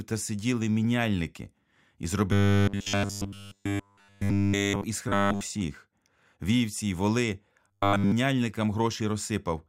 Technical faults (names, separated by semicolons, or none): robotic sound from repeated short buffers